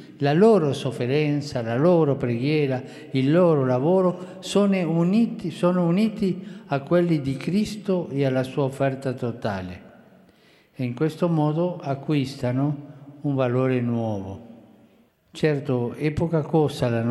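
No technical faults can be heard anywhere in this audio.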